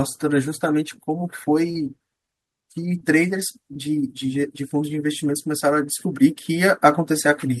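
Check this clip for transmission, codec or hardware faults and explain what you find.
Short concealed packet loss occurs three times: at 1.71–1.75 s, 2.99–3.01 s and 3.73–3.87 s. Late audio was replaced by the decoder extrapolating the preceding sound, heard as a brief smear or wobble rather than an outright silent gap. The bridged stretches are about 30 ms, 11 ms and 18 ms.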